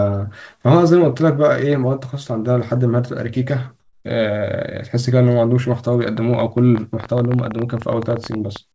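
From 3.80 to 4.04 s, a pause in the speech is filled with comfort noise in place of the background. For those 240 ms the real room tone, already about 52 dB below the loudest speech, becomes a steady, featureless hiss about 4 dB quieter, most likely because discontinuous transmission stopped sending during the pause and the receiver synthesised noise instead. On a spectrogram the textured background gives way to a smooth, uniform band that ends abruptly when the speech returns.

From 6.17 s to the end, a train of clicks ticks over the speech and the gaps alike, at about 11.6 per second with uneven spacing. The pulses are alike in shape and peak somewhat above the speech itself. The likely source is interference or a struggling interface. In the waveform they show as narrow spikes rising above the speech envelope. On a spectrogram they form thin vertical lines reaching up to the 8 kHz ceiling that the G.722 call path imposes on everything in the clip.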